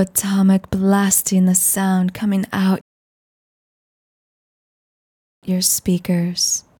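At 2.81 s a rebuffering stall cuts the sound to flat silence, a blank gap on waveform and spectrogram, until 5.43 s. Playback ran dry and resumes exactly where it stopped, adding 2.6 s.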